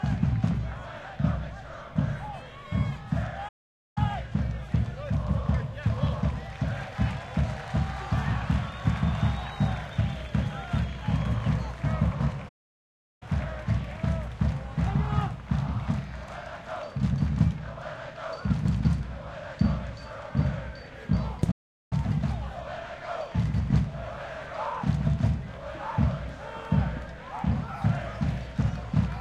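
At 3.48 s, 12.48 s and 21.51 s the sound cuts out mid-flow and stays silent for 0.48 s, 0.72 s and 0.40 s before continuing. These are playback stalls, likely the player starving for data or its thread being blocked until output could resume. Unlike a click or a dropout lasting a few milliseconds, each silence is long enough to register as the audio freezing, then picking up again.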